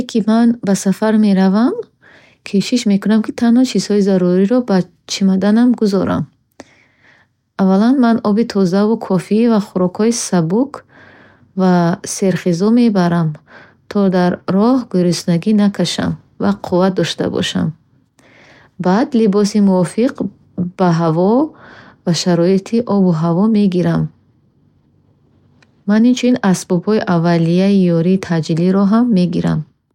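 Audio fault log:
No fault is heard in this audio.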